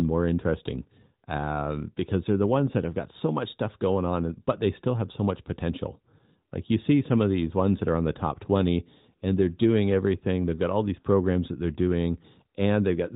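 Speech, with nothing technically wrong to report.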